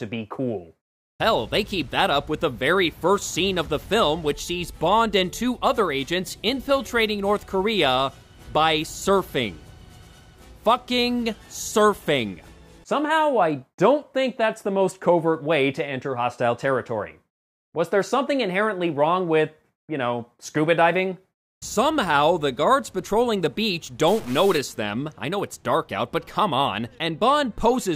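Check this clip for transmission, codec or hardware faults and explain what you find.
One hardware fault appears, a stuck bit, from 24.08 to 24.58 s. A data line or converter bit likely held a fixed value, shifting about half the samples by a step of around -35 dBFS. This produces harsh, buzzy distortion, with a noise floor that jumps in the quieter moments.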